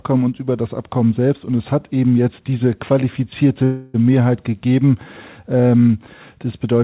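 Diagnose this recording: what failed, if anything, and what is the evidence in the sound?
A call audio freeze at 3.64 s hits the network and jitter-buffer stage. For about 0.3 s, up to 3.96 s, the last bit of sound is stretched into a fading buzz rather than dropping to silence. Then the audio picks up right where it left off, nothing skipped, just running about 0.3 s later. That's the signature of the jitter buffer running dry, most likely because packets got held up in transit. Through the G.711 path there's nothing above 4 kHz.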